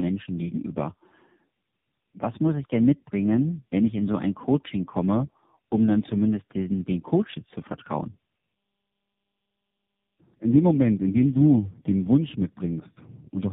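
Throughout, the speech suffers tandem speech coding. Its character points to three low-rate speech codecs in a row, each re-encoding the previous one's errors, so it sounds rough, muffled and warbly. A spectrogram shows nothing above 3.7 kHz and smeared, blurred harmonics.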